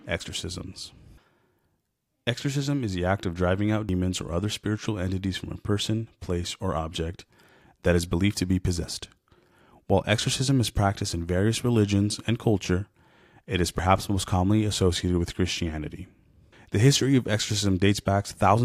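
Speech with audio missing between chunks at 3.89 s, between "act of driving out" and "or other spiritual entities": roughly a twentieth of a second vanishes and the sides butt together without the silent gap a dropout would leave, likely from chunked recording with 5-second segments.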